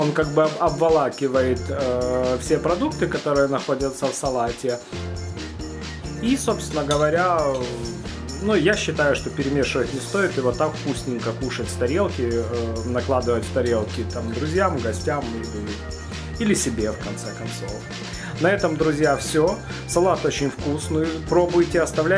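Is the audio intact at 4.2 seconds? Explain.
Yes, the audio is intact at 4.2 seconds, with no dropout, click, distortion or other fault to be heard at that moment.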